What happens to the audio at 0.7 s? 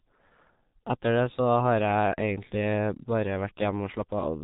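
At 0.7 s, as throughout the speech, a G.723.1 codec coding in coarse 30 ms frames at a rate that fits about 6 kbit/s removes everything above 3.8 kHz, leaving the voice muffled, hoarse, with smeared consonants.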